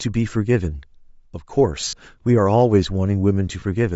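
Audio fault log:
throughout: Bluetooth LC3 compression, likely at around 32 kbps with 10 ms frames. The upper spectrum is thinned and noise-filled, giving the speech a plainly audible breathy, grainy edge.
1.81–1.93 s: lost LE Audio frames. About 90 ms of audio is missing, scattered over 120 ms with the longest gap near 50 ms. The decoder repeats the last spectrum with randomised signs, so the speech smears into noise.
3.60 s: lost LE Audio frames. A 20 ms gap, consistent with two 10 ms frames, is concealed with a brief noisy repeat of the preceding spectrum, heard as a short rough blur.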